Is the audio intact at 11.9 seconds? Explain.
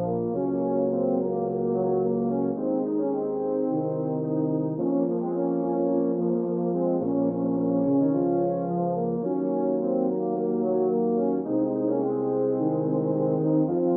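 Yes, the audio is intact at 11.9 seconds, with no fault audible at that point.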